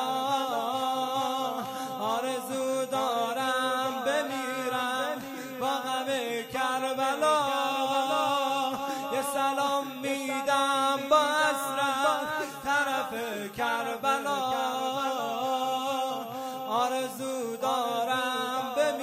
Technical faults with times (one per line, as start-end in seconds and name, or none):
0.00-19.02 switching supply whistle
7.93 compressed frames skipped